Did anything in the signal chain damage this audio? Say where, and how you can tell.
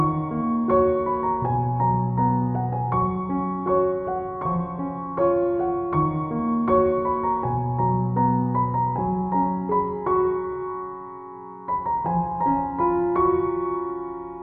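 No, nothing along the chain seems to have touched this one; there's nothing to point to at any stage, so you can take it as it is.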